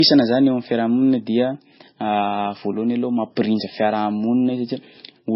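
From the start to the end, the speech sits under a hard ceiling, with nothing above about 5.5 kHz. It sounds dull and a bit swirly, with smeared consonants and that watery low-bitrate texture. This is likely low-bitrate audio saved at a high bitrate: the smearing fits an MP3 squeezed to something near 18 kbit/s and later written out again at a much higher rate. That second pass can't restore the top end or clean up the damage.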